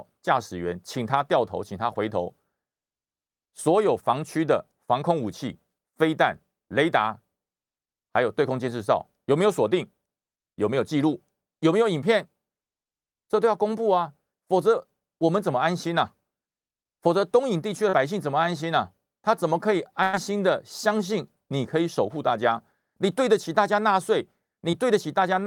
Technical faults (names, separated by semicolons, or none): short concealed packet loss; burst of packet loss